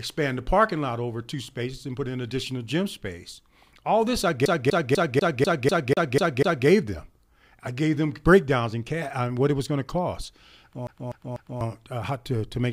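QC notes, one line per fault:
4.45–6.67 s, CD stuck on one turn: the same 0.25 s of speech plays nine times in a row. A scratch keeps knocking the laser back one track at the same point on each rotation, giving a fast, even stutter with a brief mute at every jump. On the waveform, identical blocks repeat at regular intervals. On the spectrogram, the same pattern is stamped out side by side, with thin vertical gaps between copies.
10.87–11.61 s, CD stuck on one turn: the same 0.25 s loop, now repeated three times. The identical interval points to the same scratch being caught again. It shows the same repeating blocks, split by short silences.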